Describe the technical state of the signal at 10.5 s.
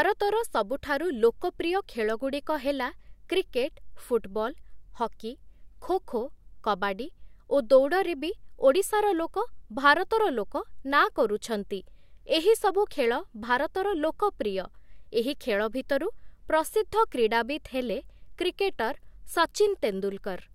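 At 10.5 s the speech signal is intact, with no audible fault at that moment.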